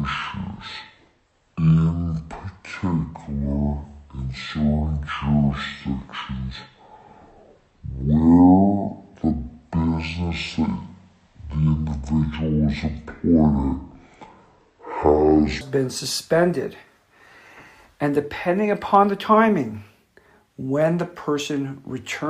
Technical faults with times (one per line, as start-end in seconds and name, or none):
0.00-15.61 section at the wrong speed